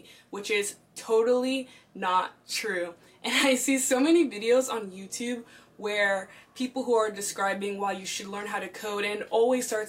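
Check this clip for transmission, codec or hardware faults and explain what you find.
No transmission, codec or hardware faults.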